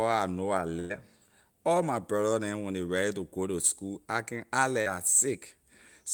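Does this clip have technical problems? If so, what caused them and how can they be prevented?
Yes. A burst of packet loss runs from 0.79 to 0.92 s. About 100 ms of audio never arrived in time. The receiver stretched the last sound across the hole and faded it down. The speech then resumes with that stretch missing. A larger jitter buffer and redundancy such as forward error correction would let the receiver recover these packets.

A short concealed packet loss appears from 4.82 to 4.88 s. Roughly 40 ms failed to reach the decoder. The receiver extended the preceding sound and then blended back into the real audio, leaving a brief smear. A more stable network path with less congestion would prevent these dropouts.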